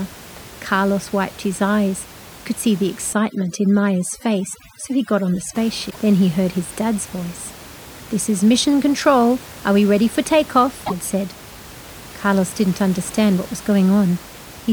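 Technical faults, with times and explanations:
3.13 to 5.55 s, overdone noise removal: Just after "could see the", the room noise, about 20 dB below the speech, drops and breaks up into twinkling specks. An over-strong noise reducer is cutting single frequency bands near its noise estimate. Quiet parts of the speech vanish too.
5.87 to 5.96 s and 10.83 to 10.93 s, damaged data in a compressed stream: Each is a short glitch lasting about 0.1 s. Corrupted bytes in the compressed stream make the decoder misread those frames. It loses sync, and the garbled output plays until it finds the next valid frame header.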